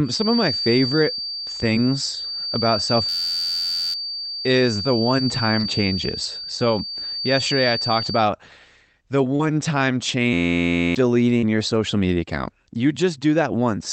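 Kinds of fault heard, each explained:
Feedback whistle: A thin tone near 4.6 kHz sits a few decibels below the speech from the start until about 8.3 s, then stops. It is likely a loudspeaker-to-microphone loop held just at the edge of feedback, so the tone lingers without building. Unlike a runaway howl, it never builds up or swamps the speech. Unlike an electrical hum, it sits at one high pitch rather than a low fundamental with harmonics.
System hang loop: From 3.09 to 3.94 s and again from 10.33 to 10.95 s, the speech is replaced by a hard, mechanical buzz at about 86 Hz. It comes from one 11.6 ms slice of audio repeating exactly, which fits a 512-sample buffer cycling while the system froze. About a second of speech is lost in the first event and a bit under a second in the second. The exact, rigid repetition and its length separate it from packet-loss concealment.
Short concealed packet loss: At 5.59 s, 9.35 s and 11.39 s, roughly 40 ms of audio went missing each time. 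The decoder filled each gap by extending the preceding sound before blending back into the real signal. Each one is heard as a brief smear or wobble lasting a few hundredths of a second, with no buzz. The fill is shaped from what came just before rather than being a rigid repeat, so it is far shorter and softer-edged than the hang loops.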